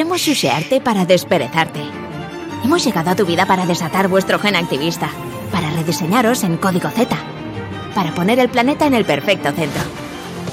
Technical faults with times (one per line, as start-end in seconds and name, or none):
1.67 audio missing between chunks
5.66 audio missing between chunks